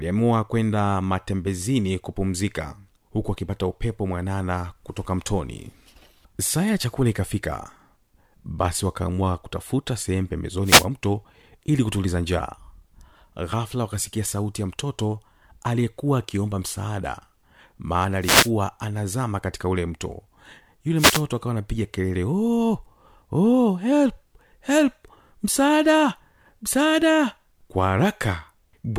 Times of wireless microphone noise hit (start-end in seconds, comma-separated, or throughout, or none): 10.64-10.87, 18.21-18.51, 20.96-21.23